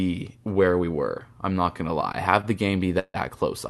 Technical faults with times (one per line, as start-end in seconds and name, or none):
2.41-2.45 short stall from a late packet
2.99-3.16 call audio freeze